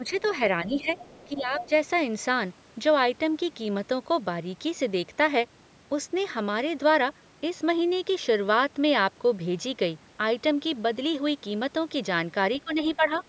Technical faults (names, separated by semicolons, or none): speech suppressed in double talk; other side's voice leaking through